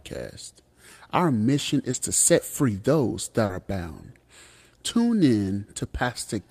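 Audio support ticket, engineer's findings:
Short concealed packet loss, two events. 1.91–1.95 s, just before "to set free those": about 20 ms of speech arrived too late for the decoder, and the receiver's concealment extended the preceding sound, giving a brief smear. 3.45–3.51 s, between "to set free those" and "are bound": about 40 ms filled by continuation then blended back, heard as a short wobble.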